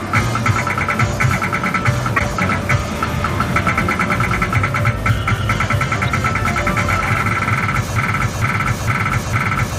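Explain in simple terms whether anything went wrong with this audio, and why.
Yes, two things go wrong. Between 2.16 and 2.24 seconds there is a brief, harsh blip, a sudden burst of noise that jumps out for less than a tenth of a second. This is a corrupt frame decoded. The audio was stored in small compressed chunks, and a few of them were damaged. The player decoded them anyway, so for that moment the sound landed at the wrong pitches and came out as garbage.

From 7.96 seconds to the very end, the sound gets stuck. The same short piece, just under half a second long, plays over and over, four times in a row, like a scratched disc. This is a broken-record loop. The likely cause is that playback or the stream stalled and kept resending the last bit of audio it still had. Whatever should have been heard during those final seconds is simply missing.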